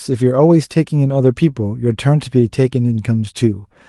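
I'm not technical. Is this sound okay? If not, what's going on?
Yes, it's fine: this speech went through an ordinary online call connection, which softens the very top of the sound a little as such calls normally do, and nothing in it needs fixing.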